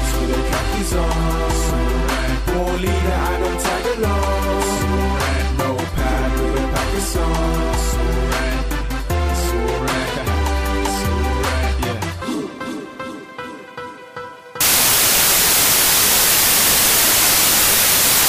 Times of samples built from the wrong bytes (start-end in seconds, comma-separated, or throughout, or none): 14.61-18.29